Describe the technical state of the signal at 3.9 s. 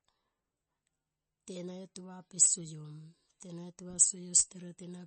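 At 3.9 s the speech is still carrying the same damage that runs through the whole clip, likely MP3 compression. Nothing gets through above about 8.3 kHz, and the watery, swirly texture is plainly audible, which fits a starved bitrate around 32 kbps. The encoder drops weak frequency lines frame to frame.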